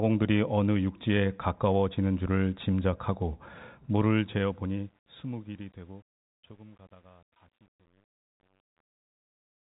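From about 4.09 s the speech, fading out toward the end, turns gritty. From 5.27 s to the end at 9.63 s the grit is at its worst. This is truncation distortion on a fade: the volume stage drops low bits without dither, so quiet samples collapse into a few coarse square steps, which fits a stage holding roughly 9 bits. The telephone-band sound, with nothing above 3.8 kHz, carries this graininess.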